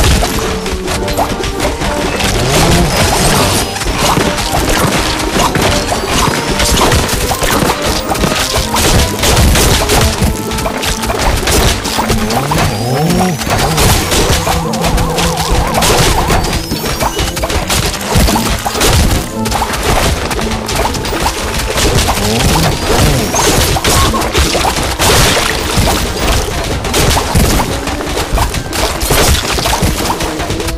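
From the start to about 6.89 s there's a section at the wrong speed: it runs at roughly 0.89 times normal, so everything sits about two semitones low and drags. Likely that stretch was played back against the wrong clock before snapping to proper speed.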